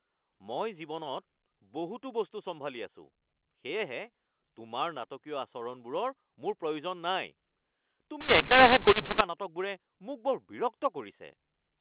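From 8.21 s to 9.21 s, just before "নাটকবোৰে মোক বৰ", the speech shows a mu-law and A-law mix-up: samples encoded with the A-law curve are expanded as if they were mu-law. Because the two logarithmic curves map codes to levels differently, loud and soft samples land at the wrong amplitudes and near-silent ones are pushed well above zero. The speech turns harsh and gritty, and the gaps fill with noise. Around it, the A-law telephone band, sampled at 8 kHz and limited to below 4 kHz, is heard clean.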